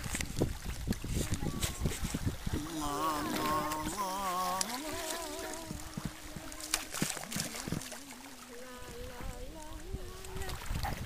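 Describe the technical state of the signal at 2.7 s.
At 2.7 s the signal is intact, with no technical fault present at that moment.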